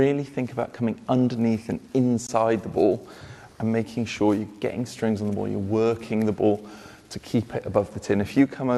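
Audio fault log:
2.27 s, gap at a join of encoded pieces: separately encoded pieces, repeating every 6 s, were joined untrimmed, leaving encoder delay and padding as a 19 ms gap.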